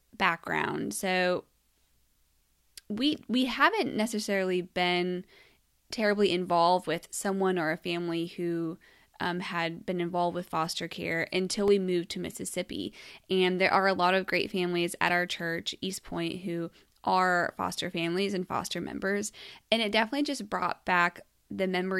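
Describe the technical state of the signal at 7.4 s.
At 7.4 s the speech signal is intact, with no audible fault at that moment.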